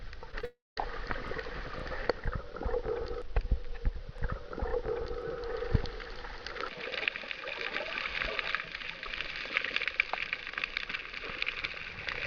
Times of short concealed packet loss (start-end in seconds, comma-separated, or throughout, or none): 0.31-0.45